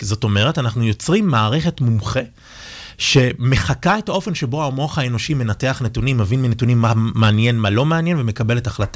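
Nothing in this speech recording stands out as a technical problem; the signal holds steady in level and timing throughout.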